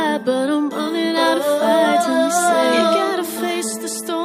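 Nothing stood out as a technical fault on listening to this clip.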